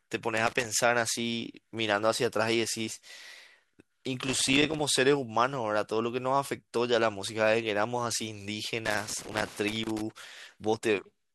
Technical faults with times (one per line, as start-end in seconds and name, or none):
0.36-0.65 loose connector crackle
4.26-4.80 loose connector crackle
8.85-10.01 loose connector crackle